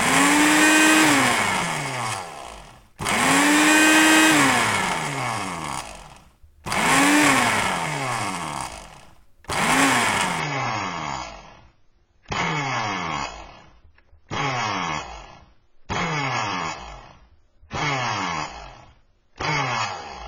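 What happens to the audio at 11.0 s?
At 11.0 s the sound has already turned dull, with nothing above 7 kHz. The change arrives suddenly at 10.40 s with no gap and lasts to the end. It is an adaptive stream at a lower bitrate: the player dropped to a leaner encoding, which fits a fall from about 96 to 16 kbit/s AAC.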